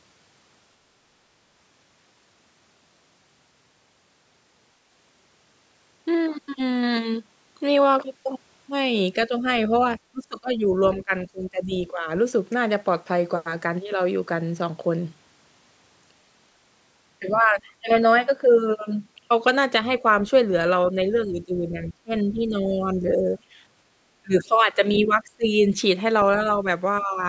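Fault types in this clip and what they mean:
Speech suppressed in double talk: When both ends of the call were talking at once, the echo canceller likely could not tell the near talker from the loudspeaker echo and turned the whole signal down. The speech dips or breaks up in pieces at 9.28 to 12.07 s, 17.2 to 17.89 s, 20.92 to 23.28 s, 24.22 to 24.51 s and 25.05 to 25.65 s. The drops range from about 10 dB to about 30 dB.
Other side's voice leaking through: The echo canceller likely did not fully remove the far-end voice playing from the loudspeaker. Brief scraps of that second voice get into the microphone signal. One appears around 25.03 s, about 20 dB below the talker. Another, fainter one appears around 26.4 s, about 30 dB down.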